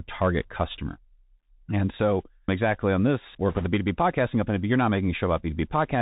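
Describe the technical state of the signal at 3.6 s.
At 3.6 s the speech sits inside a burst of bit errors on a Bluetooth voice link, from 3.50 to 3.67 s. Flipped delta bits, roughly a few percent of them, add rushing crackle; a spectrogram shows broadband speckle with no sharp waveform spikes. Underneath, the Bluetooth CVSD headset codec is plainly audible: its one-bit adaptive steps, consistent with a 64 kbps stream, leave a granular hiss and a hard cutoff near 4 kHz.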